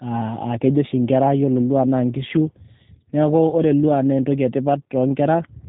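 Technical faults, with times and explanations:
Throughout, G.729 codec: the speech passed through a low-rate VoIP coder that rebuilds it from a vocal tract model, a pitch predictor and sparse pulses, which fits an 8 kbit/s rate. Nothing above 3.8 kHz survives, leaving it dull, with plainly audible rough, synthetic grain.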